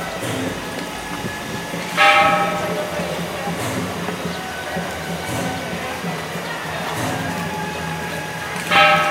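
Linear timecode running at 24 frames per second has leaked from a neighbouring track or cable into the audio for the whole clip. This timecode bleed adds a steady chirping warble, flipping between tones near 1 and 2 kHz, sitting roughly 15 dB below the sound.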